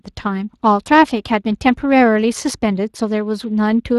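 From start to finish the speech sounds grainy and hoarse, with a hissy, noise-like sheen on the upper band above 8 kHz. These are plainly audible Speex codec artefacts at 22.4 kbps: the CELP coder rebuilds the excitation and synthesises the highest band.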